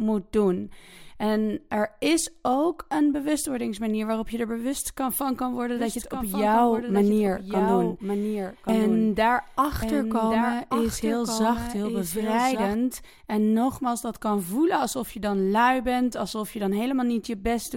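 From 5.76 s to 12.75 s the speech picks up a doubled audio track: a second full-band copy trailing about a second behind, roughly 5 dB quieter, with no room tail. It likely comes from the audio being captured twice, and it cuts in and out abruptly.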